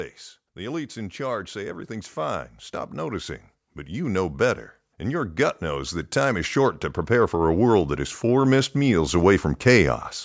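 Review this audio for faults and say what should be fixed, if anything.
Automatic gain rising runs from 0.54 s to 9.46 s. The gain control judged the input too quiet and kept turning it up, so the speech and the background noise swell together by about 16 dB across those nine seconds. A stronger, steadier input level at the microphone, or a gain control limited in how far and how fast it can climb, would prevent it.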